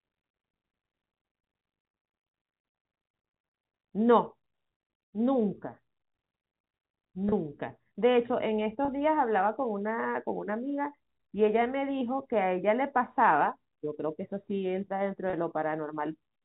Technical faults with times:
7.29-7.32 packet loss with pitch repetition
8.85-8.88 packet loss with pitch repetition
15.30-15.33 packet loss with pitch repetition

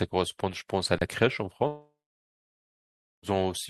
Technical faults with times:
0.98-1.01 underrun with held sample
1.67-3.25 long network dropout

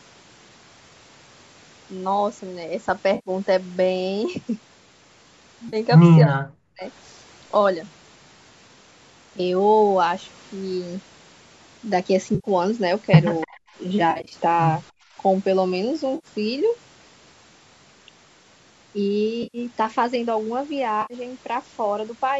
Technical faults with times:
3.15-3.30 AAC frame loss with concealment
5.68-5.76 AAC frame loss with concealment
6.24-6.84 speech suppressed in double talk
12.35-12.47 AAC frame loss with concealment
13.40-13.56 echo leak
13.45-13.71 speech suppressed in double talk
14.11-14.34 AAC frame loss with concealment
14.91-15.16 background gated by the echo canceller
16.15-16.27 AAC frame loss with concealment
19.43-19.58 AAC frame loss with concealment
21.02-21.14 AAC frame loss with concealment

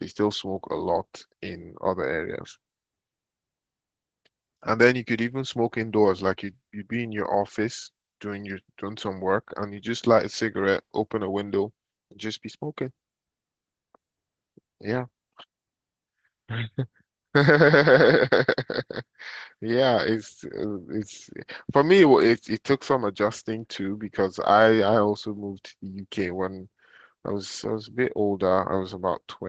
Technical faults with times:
0.00-29.49 Opus voice compression

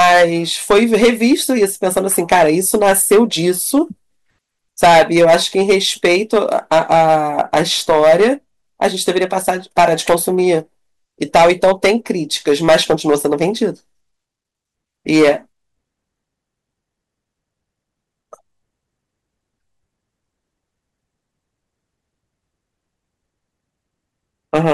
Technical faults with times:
0.00-0.24 hard clipping
0.71-3.79 hard clipping
4.83-8.31 hard clipping
8.82-10.57 hard clipping
11.22-12.11 hard clipping
12.48-13.45 hard clipping
15.10-15.31 hard clipping
24.54-24.74 hard clipping

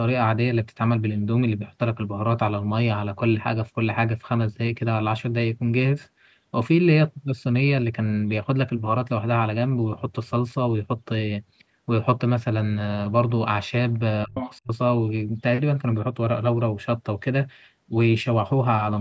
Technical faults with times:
14.26-14.36 speech suppressed in double talk
14.35-14.57 other side's voice leaking through
14.63-14.71 speech suppressed in double talk

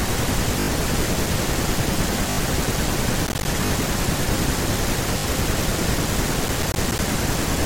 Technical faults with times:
0.60-0.68 repeated buffer
2.30-2.38 repeated buffer
3.27-3.45 processor overload crackle
3.66-3.70 repeated buffer
5.18-5.24 repeated buffer
6.48-6.99 processor overload crackle

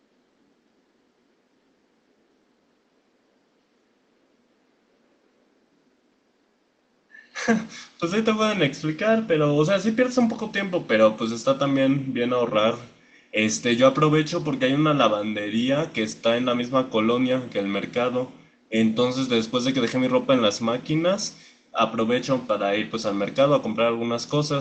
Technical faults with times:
none

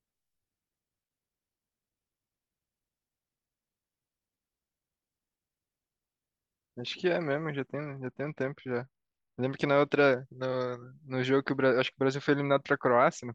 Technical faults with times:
7.74-10.17 Bluetooth SBC bit pool drop

